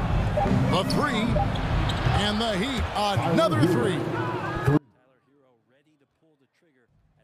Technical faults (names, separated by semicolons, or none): audio dropout to a faint residue